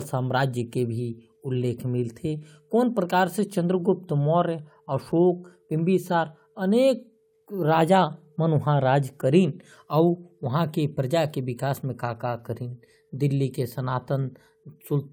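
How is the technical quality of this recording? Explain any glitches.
Nothing in the recording stood out as a technical problem on listening, so there are no glitches to explain.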